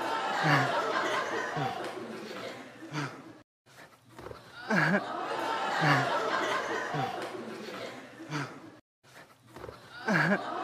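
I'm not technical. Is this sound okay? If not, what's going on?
Yes, this sound is okay, and nothing is going on with it that needs fixing.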